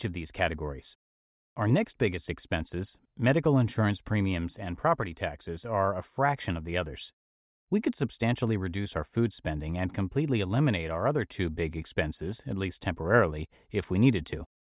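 Listening through the speech recording, nothing stood out as a technical problem at any point.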